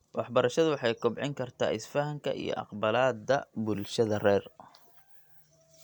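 No technical faults can be heard anywhere in this recording.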